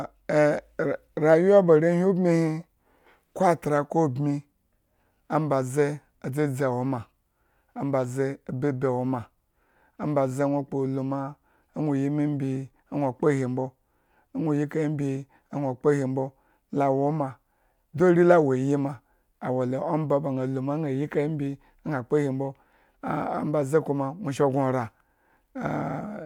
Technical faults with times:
none

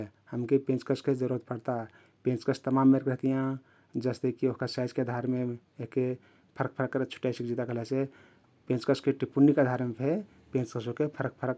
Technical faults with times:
none

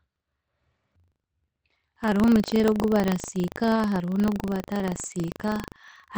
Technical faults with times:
0.00-6.18 buffer tearing
2.69-2.83 lost packet rebuilt from error correction
3.75-3.77 lost packet rebuilt from error correction
5.05-5.07 lost packet rebuilt from error correction

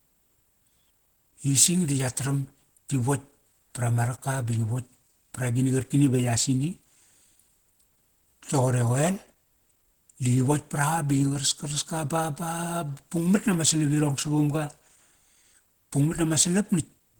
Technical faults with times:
0.00-17.20 Opus compression

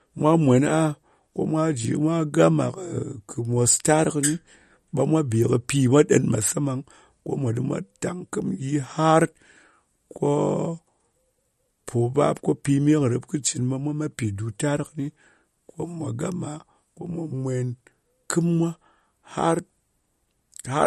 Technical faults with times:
0.00-20.86 MP3 compression

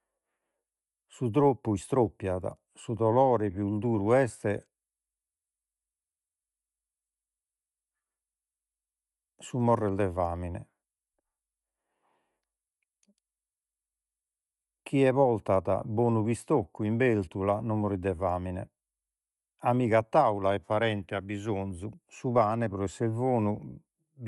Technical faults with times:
0.00-24.28 Bluetooth LC3 compression

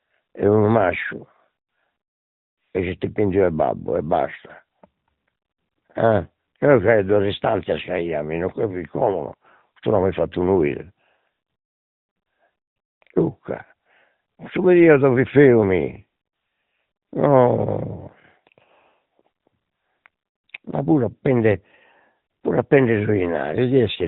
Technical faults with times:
0.00-24.08 AMR narrowband mobile codec

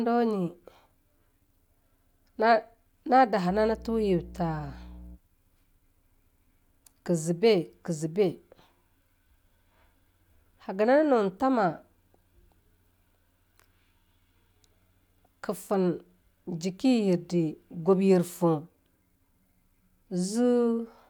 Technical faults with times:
3.48-5.18 mains hum

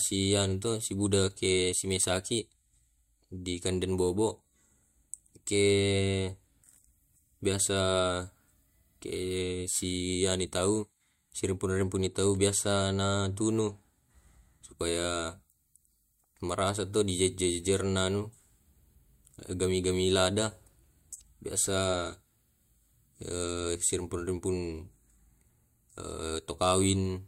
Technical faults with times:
none

